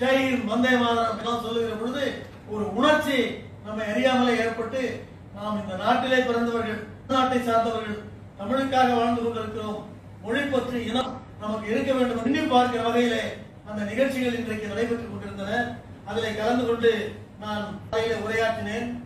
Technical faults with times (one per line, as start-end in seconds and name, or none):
1.21-1.27 damaged data in a compressed stream
7.06-7.12 damaged data in a compressed stream
11.01-11.07 damaged data in a compressed stream
12.22-12.27 damaged data in a compressed stream
17.88-17.94 damaged data in a compressed stream